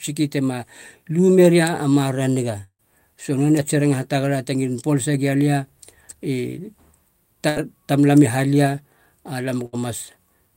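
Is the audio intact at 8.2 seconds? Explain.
Yes, at 8.2 seconds the speech plays through without any audible fault.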